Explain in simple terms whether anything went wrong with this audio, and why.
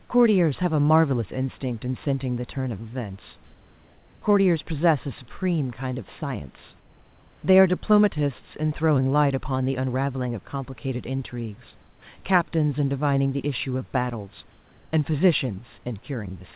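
One short stretch goes wrong. From 11.81 to 12.02 seconds, about a fifth of a second, the natural room background drops out. A smooth, even hiss takes its place, slightly quieter and with no detail. This is comfort noise in place of the background. The likely cause is the call system pausing transmission when it heard no speech. The receiving end then filled the gap with artificial noise. The sound has the narrow, phone-like tone of a call line throughout.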